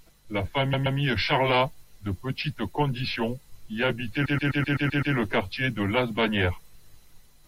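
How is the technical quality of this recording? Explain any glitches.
The recording has two stutters caused by repeated frames. From 0.72 to 0.98 s, a 128 ms block plays two extra times. From 4.24 to 5.14 s, between "petite condition y habitait" and "le quartier de", one block loops seven extra times, which fits a run of about six compressed frames being sent again. The decoder replays identical audio, adding 256 ms and 896 ms. On a spectrogram, identical 128 ms tiles repeat side by side, with a seam at each join.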